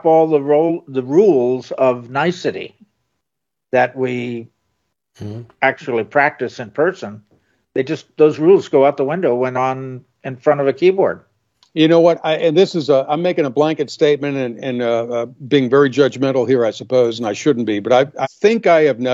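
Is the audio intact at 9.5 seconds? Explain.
No. Around 9.52 to 9.57 s, compressed frames were skipped: a few whole frames were missing or rejected as damaged and never decoded. The audio jumps ahead by about 150 ms, which fits roughly three frames of about 46 ms each, leaving an audible discontinuity at the join.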